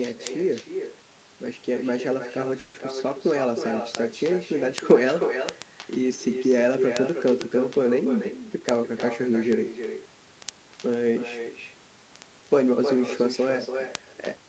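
From the very start the whole clip carries echo with no canceller: every phrase comes back roughly 300 ms later, only about 7 dB below the speech, as a thinner copy. The far end played the call on a loudspeaker, its mic picked it up, and nothing subtracted it before it was sent back.

From about 0.14 s to the end there's a steady run of word clock ticks, sharp clicks of uneven strength arriving roughly every 70 ms. That's a digital link being read by a device on its own clock, drifting by something like a few hundred parts per million against the sender. Each time the two clocks slip past each other, a single sample gets dropped or repeated, and that's the tick.

At 2.59 s the speech stalls for about 150 ms, to 2.76 s, with the last sound stretched into a fading buzz instead of real speech, then it carries on from where it stopped without losing anything. That's a call audio freeze, likely because packets were held up and the jitter buffer ran dry, so the gap is pure padding and pushes everything after it about 150 ms later.

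Then there are two jitter buffer speed-ups. From 7.98 s to 8.61 s the speech runs at about 111% speed, and from 13.19 s to 14.10 s at about 108%, each time at the same pitch but sounding hurried. The buffer had built up more delay than it wanted, so the receiver trimmed short pitch-period chunks in quick succession, roughly 70 ms in total each time. The top end stops around 8 kHz, which is just the 32 kbps Opus call path and the call's mic processing doing their normal thing.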